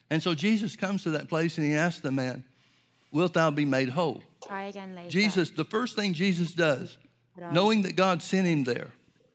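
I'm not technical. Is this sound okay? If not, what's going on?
No. There are three separate problems.

Echo leak: From 0.2 to 0.42 s, a faint, delayed copy of the talking trails behind the original by a little under a third of a second. It comes back, a bit louder, from 4.4 to 4.49 s. The likely cause is that someone on the call was using a loudspeaker, and their phone or computer didn't fully cancel what its own microphone picked up from that speaker, so some of it was sent back.

Background gated by the echo canceller: Between 2.37 and 2.89 s, for about half a second, the room sound behind the voice suddenly drops away almost to silence, then returns. The call software's echo canceller did this. While the loudspeaker was playing, it turned the microphone right down to keep echo out, and the background went with it until the canceller let go.

Speech suppressed in double talk: The talker's voice nearly vanishes in three places. 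From 4.15 to 4.49 s it drops for about a third of a second. From 6.09 to 7.43 s it drops for about a second in all. From 7.79 to 8.33 s it drops for about half a second. This likely happened because both people spoke at once, and the echo canceller couldn't tell this voice apart from the loudspeaker echo, so it pushed both down.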